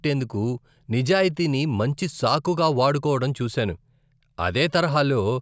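No technical faults can be heard anywhere in the speech. Nothing in the recording points to a problem in how it was captured, processed or played back.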